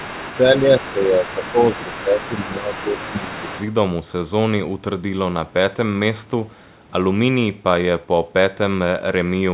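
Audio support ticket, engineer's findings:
Other side's voice leaking through: second talker at 0.0–0.38, 0.79–0.93, 1.25–2.03 and 2.2–3.72 s, about 15 dB below main speech. Spectrogram shows overlapping harmonic stacks. Likely echo canceller residual.

Speech suppressed in double talk: main speech dips about 5 dB (0.39–1.58 s) and about 10 dB (1.75–3.52 s) during overlap. Waveform envelope visibly notched. Likely echo canceller attenuating both talkers.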